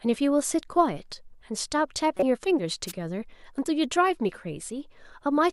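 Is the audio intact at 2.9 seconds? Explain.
No, a wireless microphone noise hit runs from 2.87 to 2.92 s: the FM radio signal fades, letting receiver noise through as a brief static swish over the speech.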